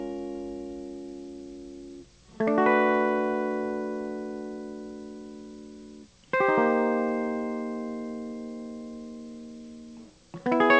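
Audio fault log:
The music comes through a WebRTC call path with the G.722 codec working as designed, so the band stops at 8 kHz and the signal holds steady with nothing breaking from it.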